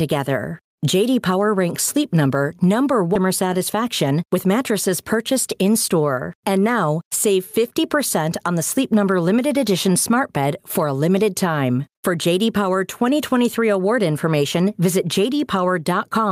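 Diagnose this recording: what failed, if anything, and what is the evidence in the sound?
Call processing likely failed: input gain sits too high and a fast limiter clamps each loud syllable. The gain swings roughly 10 dB throughout, leaving the speech squashed and flat in dynamics.

At the network or jitter buffer stage, a skip ahead occurs at 3.15 to 3.17 s. Audio already queued was dropped rather than played, about 0.7 s of speech vanishes, and the two sides join almost directly with no fill.

Right after, from 3.25 to 4.36 s, a jitter buffer speed-up trims short pitch-period pieces repeatedly to shed excess delay. Speech runs about 4% faster at unchanged pitch, losing roughly 50 ms in total.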